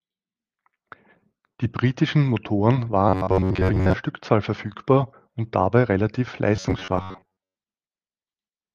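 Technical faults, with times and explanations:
3.09–3.94 s and 6.56–7.55 s (just after "verfügbar und dabei relativ"), robotic sound from repeated short buffers: audio likely arrived too slowly, so a roughly 10.7 ms slice kept repeating while most real audio was skipped, imposing a rigid 93.8 Hz metallic buzz that loosely follows the speech.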